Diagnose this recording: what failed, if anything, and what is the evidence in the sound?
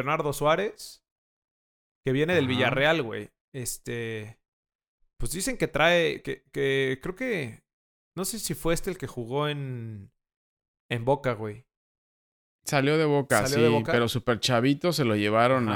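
No faults detected.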